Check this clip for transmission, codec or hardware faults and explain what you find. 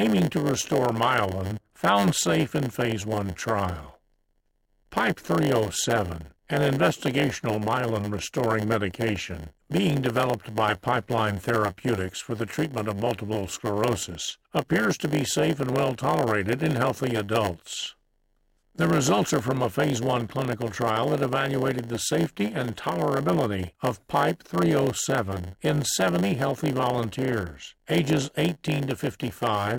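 One fault is present, running throughout the clip: a block size mismatch (padded). Each block arrives short and is zero-filled, inserting gaps that produce a 100 Hz buzz and slow playback to 0.919 speed, with pitch about unchanged.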